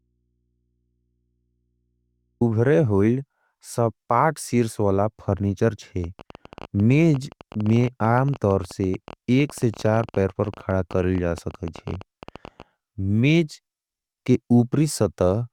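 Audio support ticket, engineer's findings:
Audio dropout to a faint residue from the start to 2.41 s. Only hum, roughly 50 dB down. Speech is likely lost upstream while the input stays live.

Train of clicks, 6.04 to 12.63 s. Around 13 per second, unevenly spaced, peaking near speech level. Likely nearby interference or a faulty connection or power supply.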